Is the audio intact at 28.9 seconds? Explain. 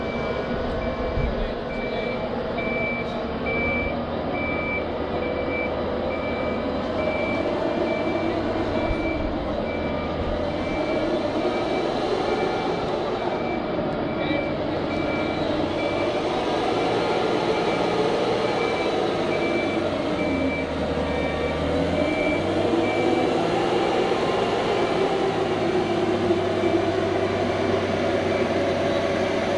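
Yes, the audio is intact at 28.9 seconds, with no fault present at that moment.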